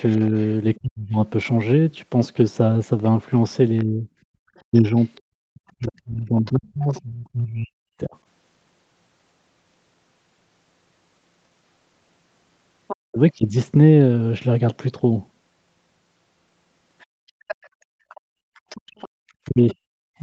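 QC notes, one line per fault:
0.09–0.78 s, 3.79–7.01 s, 12.88–12.96 s, 17.0–19.5 s: other side's voice leaking through. A second, fainter voice sits under the speech, roughly 15 to 30 dB down, loudest near 12.9 s. Likely loudspeaker echo that the echo canceller left in the microphone signal.
0.3–8.15 s, 12.96–13.19 s, 19.46–20.2 s: speech suppressed in double talk. The talker's level dips and breaks up in pieces, about 3 s in total across the first span, with drops of up to around 40 dB (around 20 dB at the end). Likely the canceller pulling everything down while both sides overlapped.
17.73–20.19 s: background gated by the echo canceller. Room sound drops out intermittently, about 1 s in total, by up to about 35 dB, then returns. The canceller clamped the microphone hard while the loudspeaker was active and released afterwards.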